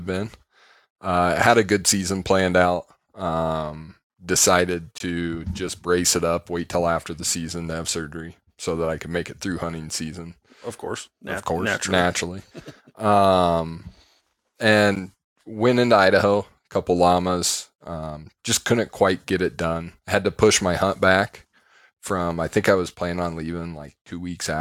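At 4.98 to 5.00 s, between "planned out um decided" and "to just brace it", a 21 ms block of digital silence cuts in. Another, 10.7 ms long, hits at 14.96 s, before "went into". They fit unfilled 1024- and 512-sample buffers.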